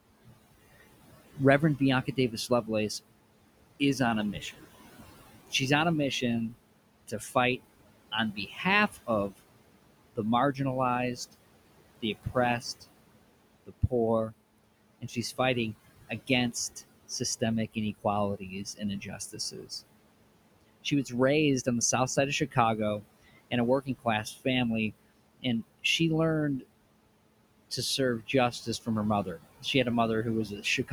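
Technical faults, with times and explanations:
Throughout: noise suppressor artifacts. The suppressor pulls down the bands it judges to be steady noise by about 21 dB, frame by frame. The room noise, sitting about 15 dB below the speech, therefore drops away in the gaps and comes back up underneath each phrase, so the background seems to breathe with the talking. A spectrogram shows a dark, near-empty noise floor between phrases and a lighter, patchy haze of noise that returns wherever speech energy appears.
1.34–2.69 s, 3.8–19.71 s, 20.84–26.64 s, 27.7–30.93 s: speech cut by the noise suppressor. Quiet parts of the speech are mistaken for noise and attenuated with the background. They sound swallowed or faint. The deepest drops are about 16, 19, 20 and 19 dB. The affected moments add up to a fraction of a second in the first stretch, around two seconds across the long second stretch, and roughly half a second in each of the last two. 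On the waveform these appear as sudden notches in the speech envelope, and on the spectrogram as missing, darkened patches in the speech.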